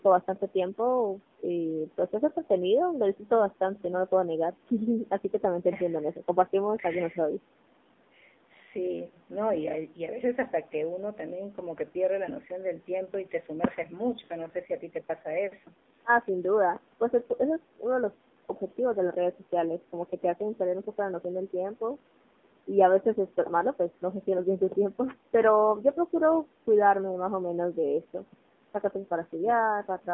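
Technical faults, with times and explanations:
Throughout: AMR narrowband mobile codec. The speech is confined to a telephone band of roughly 200 Hz to 3.6 kHz, with nothing above it, and the codec damage is plainly audible as a buzzy, synthetic quality. The encoder rebuilds each 20 ms frame from a vocal-tract model excited by only a few pulses, and at this sparse coding, which fits the 7.4 kbps mode, that excitation cannot capture natural detail. The call's microphone high-pass accounts for the missing lowest bass.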